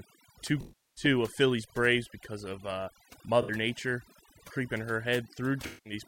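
Throughout the speech, the background sits in near silence with twinkling specks: overdone noise removal, where a heavy-handed noise reducer gates individual frequency bands that fall near its noise estimate, taking quiet voice detail with them. AAC frame loss with concealment then breaks in three times. From 0.61 to 1.04 s the sound smears and decays toward silence before returning. At 3.42 to 3.51 s, right after "because of uh", there is a brief phasey patch. From 5.66 to 5.93 s the sound smears again. In each case the decoder lost runs of compressed frames and rebuilt them from the last good spectrum, fading out over the longer gaps.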